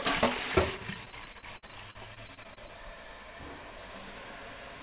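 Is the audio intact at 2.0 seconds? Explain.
No. Repeated packet loss (robotic sound) runs from 0.94 to 2.70 s. Packets keep going missing, and each hole, up to 60 ms, is filled by stretching the preceding sound. About a fifth of that stretch is patched this way, giving choppy, robotic audio.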